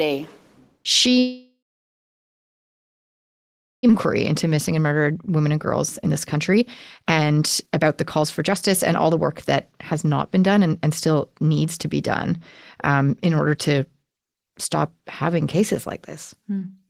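At 1.19 s the speech stops. The last sound carries on briefly as a fading buzz or hiss. Then about 2.27 s of silence follows. Speech returns at 3.91 s, but about 1.6 s of it is gone. The likely cause is a long network dropout. The receiver had nothing to play, so it padded the gap, and the return came around a second later than it should have.

Three jitter buffer speed-ups follow. The buffer had built up after the dropout. To shrink it, the receiver cut many short pitch-period pieces. Pitch stays the same, but the speech sounds hurried. From 4.31 to 5.58 s it runs at 111% speed. From 6.03 to 6.62 s it runs at 125%, the most rushed stretch. From 7.02 to 11.32 s it runs at 117%. The first two each remove roughly 150 ms. The last removes roughly 700 ms.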